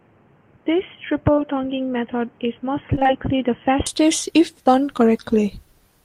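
From 0.0 to 3.87 s the input was likely switched to a poorer device, a second microphone or a headset's call mode, before returning to the better one just before "if done". For that stretch nothing reaches above 3.2 kHz, so the speech sounds dull and boxy. It sits around 5 dB quieter, over a faint new noise floor well below the speech. The change back is immediate, with no silence at the switch, and the brighter, fuller sound returns at once.

At 1.35 to 1.39 s, inside that dull stretch, a short concealed packet loss occurs. About 20 ms of audio failed to reach the decoder in time, and the receiver filled the hole by extending the preceding sound before blending back into the real signal. What you hear is a brief smear or wobble in the speech.

From 2.95 to 3.11 s comes repeated packet loss with a robotic sound. Four separate holes, none longer than 19 ms, fall within about 150 ms, and around 80 ms in total went missing. 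Each was patched by continuing the last sound, so nearly half of this short span is synthetic fill. The result is a choppy flutter with small pieces of the speech gone.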